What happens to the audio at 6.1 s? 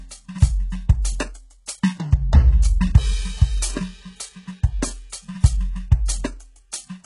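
Pre-echo at 6.06 to 6.08 s: the codec spreads quantisation noise across its block, so a short hiss smears about 26 ms ahead of the attack and blunts it.

HE-AAC compression, heard throughout this music, is the likely cause. Nothing sounds above 11.1 kHz, and the heavily damaged, gritty replicated treble fits a bitrate near 12 kbps.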